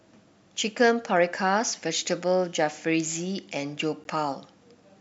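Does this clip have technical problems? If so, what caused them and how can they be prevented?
Yes, there's a gap at a join of encoded pieces at 4.04 s, a roughly 14 ms dropout in the speech with smeared edges. The audio was likely encoded in separate 6 s chunks and butted together, leaving encoder delay and end padding in. Trim that priming and padding, or use gapless concatenation, when joining.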